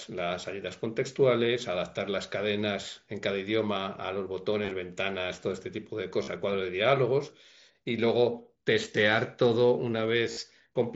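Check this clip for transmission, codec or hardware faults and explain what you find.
Three brief patches of concealed Bluetooth headset packet loss, heard through the band-limited, lightly grainy sound of the mSBC headset codec, which passes nothing above 8 kHz.

At 4.63 to 4.74 s, a flickering, slightly buzzy roughness comes and goes over about 105 ms, with no gap longer than 15 ms. The headset-to-phone link dropped scattered short packets, and the receiver filled each hole by repeating a matching stretch of the preceding waveform.

At 6.23 to 6.28 s, a steady buzzy tone at full level lasts 45 ms, followed by a small warble as real audio resumes. Here a run of consecutive packets was lost, so the same short stretch was looped continuously.

At 10.32 to 10.37 s, a similar held buzz lasts about 52 ms, with the same warble at the end. The cause is again a run of lost packets, concealed by repeating the last matching stretch of waveform.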